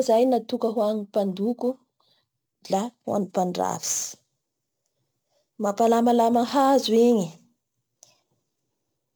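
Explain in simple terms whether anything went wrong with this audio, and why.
A hiss and grittiness ride along with the speech from start to finish, growing on louder, brighter sounds and disappearing in the pauses. That is sample clock jitter: the recorder's timing wobbled by a few millionths of a second, so each sample landed slightly off.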